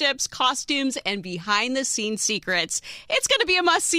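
No technical faults can be heard in the audio.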